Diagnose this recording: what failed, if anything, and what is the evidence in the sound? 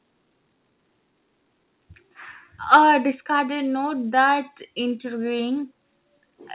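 A harsh, crackling edge hits the loudest syllable from 2.73 to 2.76 s, with peaks pushed about 3 dB past the converter's limit and a small share of samples flattened. This points to the converter stage, likely microphone overload: input gain set too high, so waveform tops are sliced off.

At 3.12 s, speech and background fall together by about 4 dB in one abrupt step, just after that distorted peak. This is call processing, likely a microphone volume step-down: the software reacted to the clipping by cutting device input gain, while the G.711 A-law path's 4 kHz ceiling stays unchanged.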